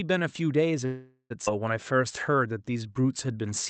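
At 0.85 s the sound stalls into a fading buzz or hiss until 1.32 s, a call audio freeze, likely from delayed packets draining the jitter buffer; nothing's lost, just a gap of about 0.45 s inserted. Then at 1.46 s there's a skip ahead: roughly 0.3 s of audio is dropped and the two sides are butted together almost seamlessly. From 1.83 to 3.51 s a jitter buffer slow-down repeats tiny pitch periods, stretching things to 89% speed, adding 195 ms, same pitch, a bit drawn out. Underneath it all, the audio is band-limited to 8 kHz with coding noise, which fits an Opus call path at around 48 kbps.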